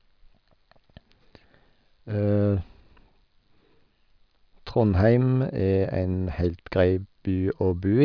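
No technical faults are audible anywhere in the speech recording.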